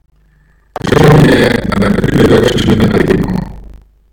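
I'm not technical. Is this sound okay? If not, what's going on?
No, it has buffer tearing from start to finish. The part of the computer that writes sound into a small looping memory and the part that plays it back have slipped out of step. About half of every 40-millisecond chunk is stale speech from roughly a tenth of a second earlier. That gives a robotic 25 Hz rattle. Unlike a mains hum, it disappears in the pauses and sounds only while someone talks.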